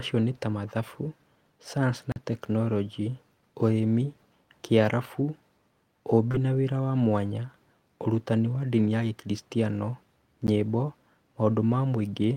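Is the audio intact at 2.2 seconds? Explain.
No. Just before that point, from 2.12 to 2.16 s, there is a block of digital silence. For 40 ms the audio drops to silence. The signal cuts out and returns with no fade on either side. At this length it is heard as a short hole in the speech. Such gaps most often come from an output buffer that was not filled in time.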